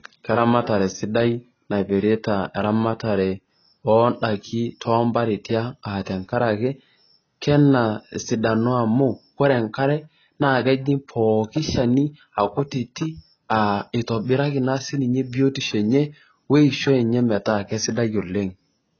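Throughout, the speech is dull and smeared, with nothing above 6.5 kHz. Heavy AAC compression is the likely cause. It fits a bitrate around 16 kbps.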